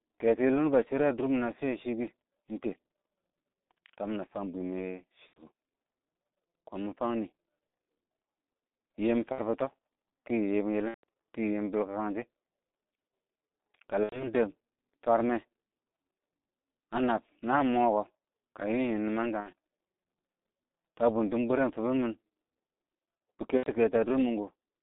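Throughout, the speech carries G.723.1 codec damage. The band runs only from 200 Hz to 3.7 kHz, and the low rate, which fits about 6.3 kbit/s, coarsely tracks the voice in 30 ms steps. Unlike simple band-limiting, this leaves the voice hoarse and consonants smeared, not just muffled.

VoIP packet loss concealed by the speech codec occurs at 5.27–5.43, 7.67–7.73, 9.32–9.40, 10.88–11.04, 14.03–14.27, 19.40–19.50 and 23.58–23.67 s. Gaps of roughly 60 to 150 ms, fitting two to five lost frames, are filled by a fading, buzzy or noisy extension of the last sound, which is muted from the third lost frame in a row in the longer gaps.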